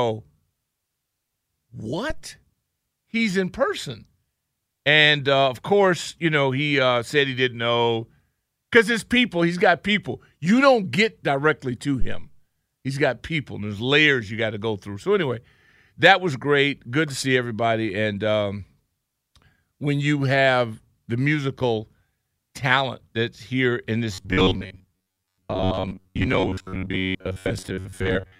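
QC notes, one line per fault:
2.10–2.27 s and 12.01–12.30 s (the second just after "don't get directly to"), phantom power thump: a supply switching on a live input sends a voltage step through the coupling capacitors, heard as a deep low thud that dies away over about 38 ms and 65 ms respectively. Unlike a plosive or handling bump, it is one isolated low-frequency step with no breath or mouth sound attached.
24.14 s to the end, robotic sound from repeated short buffers: after "talent that's here in", the speech turns into a rigid metallic buzz near 93.8 Hz. Most of this stretch is likely made of repeated fragments of roughly 10.7 ms, filling in for audio that arrived too late. That is why the buzz holds one fixed pitch while the speech underneath still moves, which sets it apart from flanging or comb filtering, where the coloration sweeps or follows the sound.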